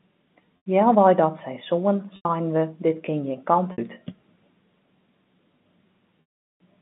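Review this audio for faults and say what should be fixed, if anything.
Held, buzzy sustains at 0.57–0.66 s, 2.16–2.25 s and 3.72–3.78 s, then a fade to silence at 6.21–6.58 s, are packet loss with pitch repetition: the receiver looped the last pitch period over 90, 90, 60 and 390 ms gaps. Adding forward error correction or redundant packets on the link would prevent it.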